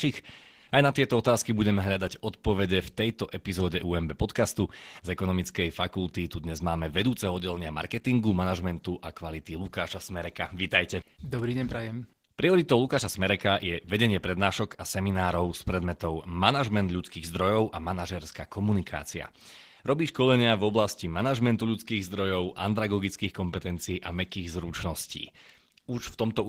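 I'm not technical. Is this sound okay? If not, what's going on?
No, not quite. From start to finish the speech carries plainly audible Opus voice compression. It's been squeezed hard to save data, so the voice comes out a bit hoarse and slightly robotic, as if each syllable has been rebuilt roughly from a sketch. The top end is still there, but it's coded more loosely on top of the main voice layer, so the crisp sounds lack detail.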